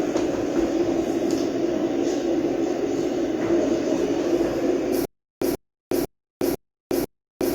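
At 5.05 s the audio turns into a stutter with silent gaps that lasts to the end. A 133 ms fragment repeats five times at an even period of about 498 ms, each repeat followed by roughly 365 ms of digital silence. The likely cause is a stalled player or stream that replays its last buffered fragment on each retry and then runs empty, so the sound that should follow is lost.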